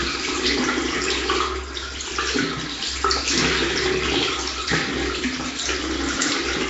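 Nellymoser compression throughout: the audio is rough and hissy, with nothing above 7.7 kHz, likely from Nellymoser Asao coding at a rate consistent with 32 kbps.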